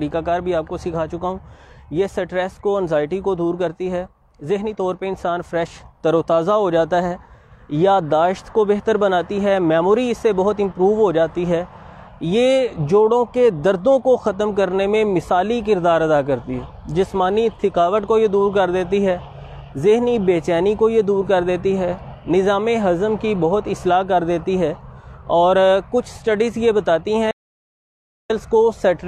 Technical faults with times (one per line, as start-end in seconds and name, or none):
27.31-28.30 stream reconnect